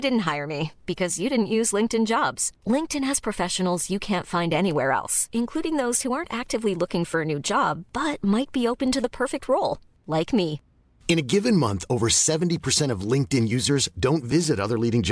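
A speech recording with nothing technically wrong with it.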